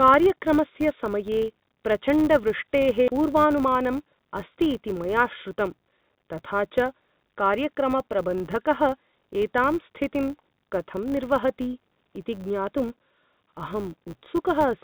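It's a speech recording that came through a call path. The band stops at 4 kHz, which fits G.711 A-law at 64 kbps. Running under the whole thing is a 100 Hz buzz from a filter restarted on every block. The filter drops its state at each block boundary and starts again from silence, so every block opens with a little transient. A steady 100 Hz tick rate points to 10 ms blocks. Because each tick scales with the signal, the buzz swells on louder passages and fades in the quieter ones. The second problem is a jitter buffer speed-up from 3.17 to 5.05 s, right after "समये प्रचण्डवृष्टेः". The buffer had built up more audio than it wanted, so it trimmed a series of short pitch-period-sized pieces, about 150 ms in total. That stretch plays at 109% speed with the pitch unchanged, so the talker sounds briefly rushed before settling back.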